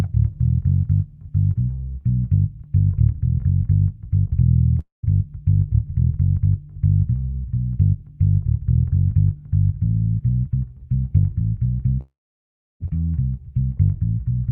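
The audio has two gaps, at 4.79 to 5.05 s and 12.01 to 12.82 s. In each, the last sound smears into a fading buzz before dying to silence, for about 150 ms of the first 240 ms hole and 680 ms of the second 800 ms one. Playback then resumes later, with that material gone. This is a long network dropout, likely from lost packets. Unlike brief packet-loss concealment, the fill fades to silence rather than bridging seamlessly.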